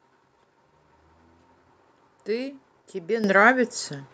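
A microphone volume stepped up fault hits this speech clip at 3.24 s. The call software judged the microphone too quiet and raised the device's input volume in a single jump of about 10 dB. Voice and background noise get louder together at once, rather than rising gradually.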